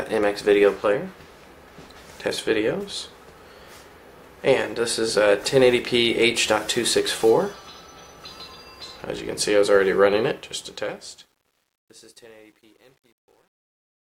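From 10.24 s the fade-out turns gritty, at its worst from 11.38 s: truncation distortion on a fade, with levels quantised to 10 bits without dither.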